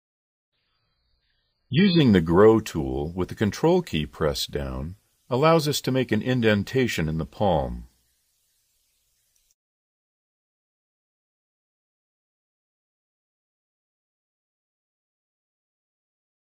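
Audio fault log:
0.0 to 2.0 s, adaptive stream starting at a low bitrate: the player opened on a very low-quality stream, which fits something like 5.6 kbit/s AAC, so nothing above 4.9 kHz survives and artefacts are stronger. A spectrogram shows an empty top band, filling abruptly at 2.0 s without any gap in the waveform.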